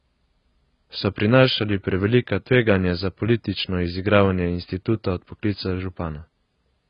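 From start to finish the speech has nothing above about 5.1 kHz and sounds dull and smeared, with a warbling, fizzy texture on sustained sounds and sibilants. This is likely heavy AAC compression, AAC-LC at a very low bitrate near 16 kbps, which lowers the cut-off and leaves spectral holes.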